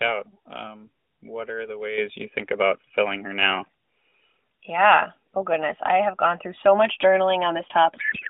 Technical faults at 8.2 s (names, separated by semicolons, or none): codec payload misread